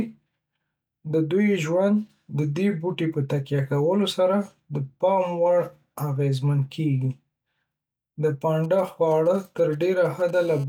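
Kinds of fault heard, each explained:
GSM signalling bursts: From 8.64 to 10.31 s, a nearby 2G phone sending short groups of radio bursts at about 217 Hz gets rectified by the audio circuit, giving a galloping dit-dit-dit of brief buzzes, roughly 25 dB below the speech.
GSM phone buzz: From 10.34 to 10.64 s, the phone transmits in bursts as in a call, its 217 Hz bursts rectified into a hard, raspy buzz rich in harmonics and unrelated to the speech, sitting about 23 dB below it.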